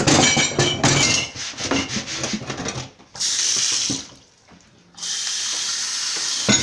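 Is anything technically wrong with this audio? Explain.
Yes. From 1.03 s to the end, the audio has a wrong sample rate fault: it is played back slower than it was captured, with no rate conversion, which fits material recorded at 24 kHz being clocked out at 22 kHz. Everything runs at about 0.92 times normal speed and drops about 1.5 semitones, so the sound turns slightly lower and more sluggish. Unlike a pitch shift or time-stretch, speed and pitch move together, and there are no warbly processing artefacts.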